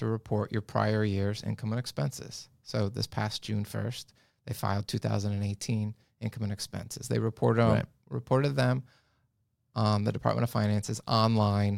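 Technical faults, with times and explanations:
3.32 s, dropped samples: a single sharp click cuts through the speech, over almost instantly, with nothing audibly missing before or after it; on a spectrogram it would be a thin vertical line spanning the whole frequency range. The likely cause is a tiny gap in the sample stream, a fraction of a millisecond lost, so the waveform leaps straight from one value to a later one, and that abrupt step produces the broadband click.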